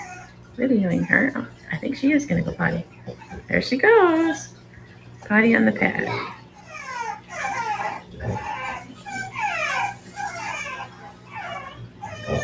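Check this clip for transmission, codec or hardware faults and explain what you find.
Two related problems run through the clip. Both come from a speech-tuned noise suppressor working on material it wasn't designed for. The band tops out at 8 kHz, which fits a G.722 call path at around 64 kbps.

The whole clip has a noise suppressor applied to music or sounds. Level keeps pumping and fluttering, with swings of around 10 dB. Sharp onsets come through intact, but sustained parts and decays thin out and sink a moment later. The suppressor is built for speech, so it treats steady tones, ambience and reverb tails as background noise. It keeps estimating that noise and pulling it down, then releasing when something sudden arrives, and that produces the uneven, breathing level.

The sound is cut by the noise suppressor in four stretches. The first runs from 0.15 to 1.69 s, with roughly 0.7 s of it pulled down. 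The second runs from 2.83 to 3.5 s, also with about 0.7 s affected. The third runs from 4.46 to 5.3 s, with around a second affected. The fourth begins at 6.34 s and lasts to the end. In each stretch the held material drops by up to about 8 dB below its surroundings and its decay is clipped short. The suppressor classed these steady portions as noise and attenuated them harder than the rest.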